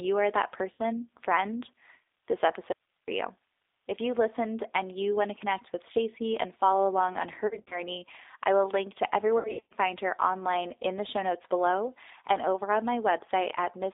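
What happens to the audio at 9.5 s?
Between 9.39 and 9.74 s, just after "I will link to", VoIP packets were dropped and the speech codec concealed the gaps. About 240 ms of audio went missing, scattered across roughly 320 ms, with the longest unbroken gap around 100 ms. That pattern fits about a dozen lost 20 ms packets. The decoder filled each hole by repeating its last pitch and vocal tract settings at falling gain. The sound there smears into a buzzy tone or coloured noise that fades. It stays weak and distorted briefly after packets resume, before "find her online in".

This happens on a G.729 link at 8 kbit/s, which runs through the whole clip. The codec rebuilds the signal from a vocal tract filter, a pitch predictor and a few pulses per 10 ms frame. The line passes only about 300 Hz to 3.7 kHz, so the audio sounds narrow, slightly rough and synthetic. That same frame-by-frame model is what stretches the lost stretch into a buzz or noise.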